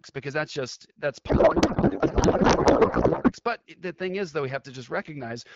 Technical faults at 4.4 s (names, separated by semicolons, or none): none